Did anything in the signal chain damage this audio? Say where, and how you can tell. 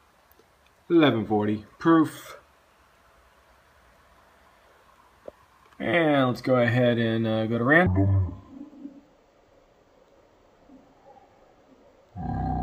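Yes. From 7.86 s to the end, stereo is read as mono during format conversion. Interleaved samples play in sequence, so the sound runs at half speed, an octave low.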